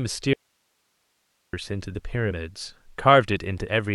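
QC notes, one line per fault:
0.33–1.53 s, audio dropout to a faint residue: the wanted signal was likely lost upstream while the path stayed live, so 1.2 s abruptly drops to hiss about 45 dB down.
2.30 s, compressed frames skipped: about two 21.3 ms frames went unplayed, so the speech jumps ahead roughly 40 ms.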